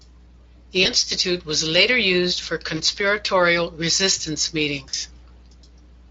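At 0.83 to 0.87 s, 2.77 to 2.81 s and 4.89 to 4.94 s the speech breaks briefly with VoIP packet loss concealed by the speech codec. The first two gaps fit a single missing 20 ms frame, the third about 40 ms. Each time the Speex decoder repeats its last pitch and spectral shape at falling gain, so the sound smears into a short buzzy tone or coloured noise that fades, and stays weak or distorted until the decoder state recovers.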